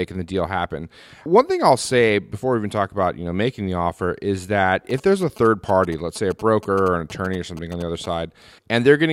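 A nearby 2G phone sending its short signalling bursts is being picked up and rectified by the audio circuit in this speech recording, producing GSM signalling bursts from 4.90 to 8.06 s, just after "the offer is that". They sound like a galloping dit-dit-dit of short buzzes at about 217 Hz, roughly 20 dB below the speech.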